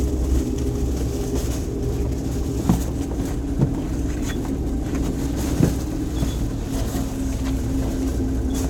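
No technical faults can be heard anywhere in these sounds.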